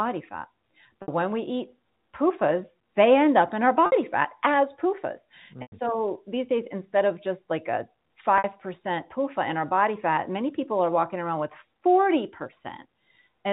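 Brief held, buzzy smears at 1.02–1.08 s, 3.86–3.92 s, 5.62–5.72 s and 8.38–8.44 s are packet loss with pitch repetition: 60 ms gaps (100 ms at 5.62 s) bridged by repeating the last pitch period.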